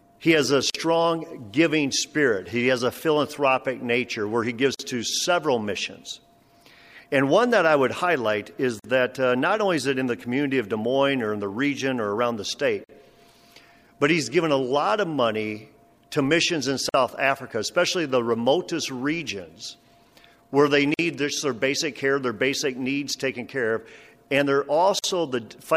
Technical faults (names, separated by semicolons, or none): gap at a join of encoded pieces